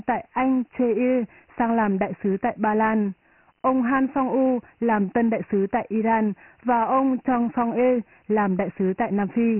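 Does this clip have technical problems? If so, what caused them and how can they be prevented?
Yes. The speech was stored as Dialogic VOX ADPCM at 24 kbps, which fits 4-bit samples at 6,000 a second, so nothing survives above 3.1 kHz and heavy quantisation leaves a gritty hiss trailing the voice. Preventing it means recording at a higher sample rate in a lossless or wideband format.

A wireless microphone noise hit occurs from 3.96 to 4.01 s: the FM radio signal faded, receiver noise rose, and a brief swish of static is heard. Diversity receivers and careful antenna placement with a clear line of sight prevent such dropouts.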